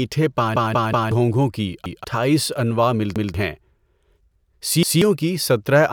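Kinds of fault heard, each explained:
Repeated buffer: fresh audio didn't arrive in time, so the last chunk, about 186 ms (fits an 8192-sample buffer), played again. The speech stutters with hard joins: three extra plays from 0.56 to 1.12 s, then one each at 1.86, 3.16 and 4.83 s.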